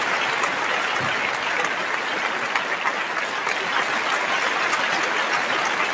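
No technical faults are audible; the audio comes over a call path with nothing above 8 kHz, which fits a wideband G.722 link at 64 kbps.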